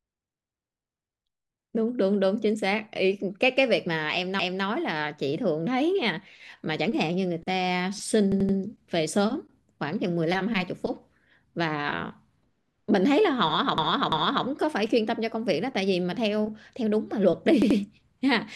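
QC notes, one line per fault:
4.39–4.65 s, 8.32–8.58 s, 13.78–14.46 s and 17.62–17.79 s, repeated frames: the speech stutters as chunks of compressed data were played again. At 4.39 s a 256 ms block plays one extra time, at 8.32 s an 85 ms block plays three extra times, at 13.78 s a 341 ms block plays twice more, and at 17.62 s an 85 ms block plays twice more. Altogether the clip runs about 1.4 s longer.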